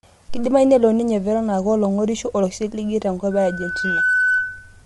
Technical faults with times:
0.00-4.86 low-delay AAC compression
3.31-4.83 loudspeaker feedback squeal

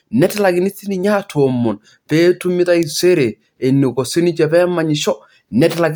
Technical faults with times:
none

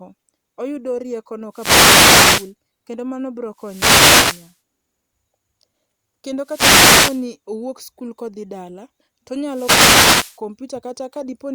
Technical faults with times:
1.51-2.54 wireless microphone noise hit
3.55-4.57 wireless microphone noise hit
6.42-7.27 wireless microphone noise hit
9.47-10.40 wireless microphone noise hit

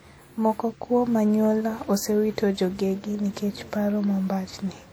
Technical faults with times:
0.00-4.92 WMA compression

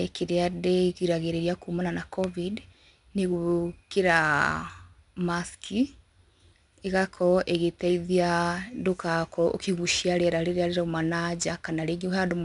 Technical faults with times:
0.00-12.45 4-bit ADPCM compression

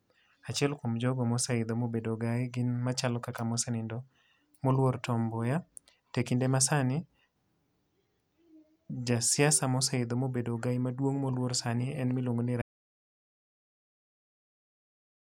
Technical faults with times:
12.62-15.23 audio dropout to silence

